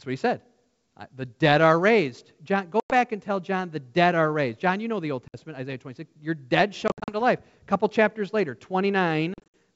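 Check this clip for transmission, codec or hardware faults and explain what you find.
Packet loss on an ADPCM call shows up four times. There are solid silent holes at 2.80–2.94 s (100 ms lost, just before "and tell") and 5.28–5.35 s (60 ms), and scattered gaps at 6.88–7.14 s (140 ms, just before "to life") and 9.34–9.54 s (140 ms), each with runs of up to 60 ms. Each hole drops a handful of packets. The receiver's adaptive predictor and step size then no longer match the sender's, so the sound comes back with brief distortion that settles within tens of milliseconds. That mistracked recovery is what separates it from plain dropouts or concealment smoothing. The wideband G.722 coding behind it sounds clear to about 7 kHz, consistent with full 64 kbit/s operation.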